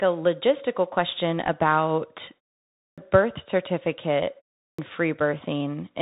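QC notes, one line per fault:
Throughout: Bluetooth CVSD headset codec. Nothing above 3.8 kHz survives, leaving a hard spectral ceiling, scratchy sibilants and a granular hiss floor, consistent with a 64 kbps one-bit delta stream.
2.86 s and 4.66 s: clipped start after a pause. After pauses of 0.54 s and 0.33 s, about 116 ms and 125 ms of onset are lost as the output wakes, so the waveform jumps abruptly from flat silence.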